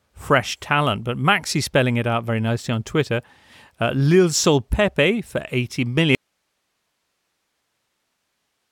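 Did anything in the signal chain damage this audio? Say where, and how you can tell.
Yes. The speech has an audio dropout to a faint residue at 6.15 s, and it never recovers before the end. The cut is abrupt, not a fade or a natural pause. What remains is steady hiss, roughly 55 dB below the speech level. The hiss shows the chain after the break stayed live and kept passing its own noise floor. The fault is likely in the analogue wiring or source feed, where the signal was lost upstream of a working preamp and converter.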